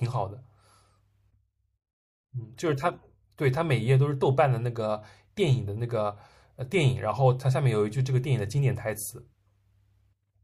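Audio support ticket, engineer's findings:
Listened to the full speech recording and nothing stood out; no findings to report.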